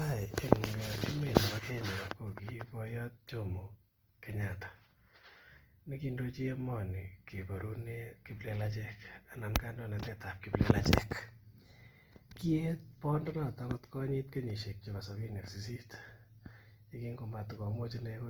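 Opus compression, throughout: the speech sounds grainy and rough, likely Opus music mode at about 24 kbps filling starved bands with noise or folded content.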